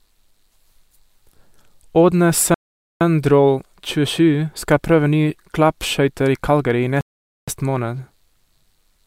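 A speech clip with two rebuffering stalls: the player drained its downloaded audio and halted until more data arrived, at 2.54 to 3.01 s and again at 7.01 to 7.48 s. Each inserts about 0.47 s of silence, after which the speech resumes exactly where it stopped, with nothing lost.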